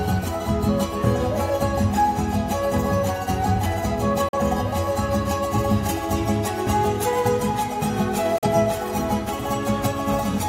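At 4.29 s the audio cuts out in a digital broadcast dropout, going silent through a fade of about 3 ms and returning at 4.38 s. The same fault recurs from 8.38 to 8.48 s. In each case the receiver muted while it lacked good data. The roughly 43 ms of lost programme points to a single discarded frame. The material sent during those holes is gone, heard as brief clean gaps, not noise.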